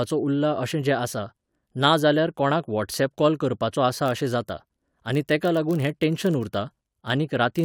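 At 3.80 s, just after "कोणाक वॉट्सऍप कॉल करपाचो", a block size mismatch (padded) begins and lasts to the end. Each block arrives slightly short and is topped up with silence. That fits a 1024-sample read block. The tiny gaps cause a steady 43.1 Hz buzz. Speed drops only to 0.999×, at normal pitch.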